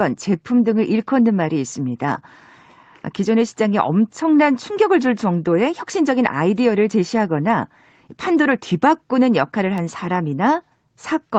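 No technical faults can be heard anywhere in the speech. The top end stops at 8 kHz, which fits the normal bandwidth limit of an Opus call path running at a modest bitrate, with the usual coding texture of such a link.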